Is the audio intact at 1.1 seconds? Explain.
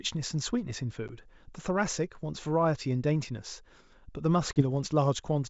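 No. Packet loss on an ADPCM call cuts a hard-edged 10 ms hole at 1.08 to 1.10 s, about one packet. Unlike a plain dropout, the resumed speech briefly returns slightly distorted because the decoder's predictor and step size have drifted from the sender's.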